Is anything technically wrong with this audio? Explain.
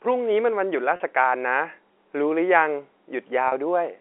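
Yes, there are two short dropouts concealed by packet loss with pitch repetition, at 0.96 to 1.00 s and at 3.48 to 3.52 s. Each lasts about 40 ms, which fits two lost 20 ms packets. The receiver filled each gap by looping the last pitch period of the speech, so these spots sound briefly held and slightly buzzy rather than silent. On a waveform, each gap shows a run of identical, repeating cycles. On a spectrogram, it shows a short stretch of frozen, evenly spaced harmonic lines that sit inside the telephone band of about 300 Hz to 3.4 kHz from the G.711 coding.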